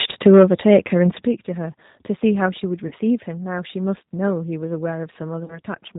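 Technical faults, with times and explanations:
Throughout: G.729 codec. Nothing passes above 4 kHz, and the speech has a slightly rough, synthetic edge because it is rebuilt from a vocal tract filter, a pitch predictor and sparse pulses, which fits 8 kbit/s G.729A. A plain low-pass would sound dull without this roughness.
2.87–2.93 s and 5.45–5.59 s: VoIP packet loss concealed by the speech codec. The decoder stretches the last pitch and filter into a fading buzzy tone or coloured noise instead of leaving silence, which fits about three to four lost 10 ms frames. The speech stays weakened briefly as frames rebuild.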